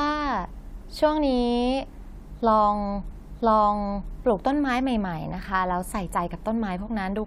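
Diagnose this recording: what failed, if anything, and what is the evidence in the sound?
About 1 s of the speech plays a second time: from 3.1 s to 4.1 s the programme jumps back and repeats, with a small blip at the join. This is a stream segment repeated at the playback stage, where the player fetched or queued the same roughly one-second segment twice.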